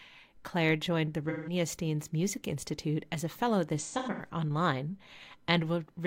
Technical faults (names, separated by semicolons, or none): AAC frame loss with concealment